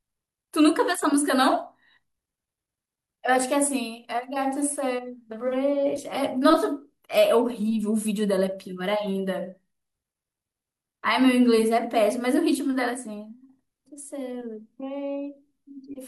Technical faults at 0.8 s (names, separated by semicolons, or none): none